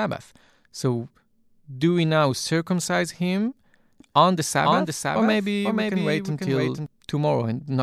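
A slower second capture likely mixes in from 4.00 to 6.86 s, after "we now circumcise him". This doubled audio track repeats the speech about half a second late, somewhat quieter, and starts and stops abruptly.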